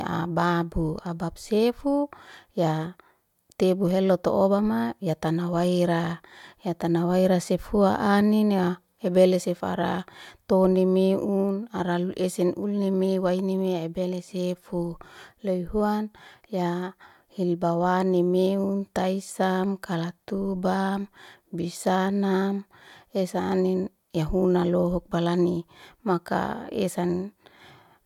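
Nothing in this speech recording stands out as a technical fault at any point, so there's no timeline of problems to walk through here.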